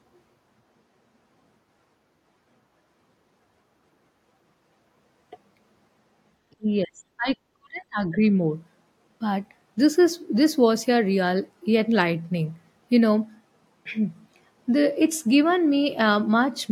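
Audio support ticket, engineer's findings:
Speech suppressed in double talk, 6.56–8.18 s: speech ducked in pieces, deepest cut around 40 dB, about a second in total. Likely echo canceller over-suppressing near-end during overlap. Unlike packet-loss gaps, these are suppressor gain cuts, not lost packets.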